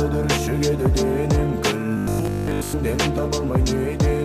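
From 1.97 to 2.75 s, robotic sound from repeated short buffers: a 50 Hz buzz, likely one 20 ms block looping, replaces most of the audio, unlike steady mains hum.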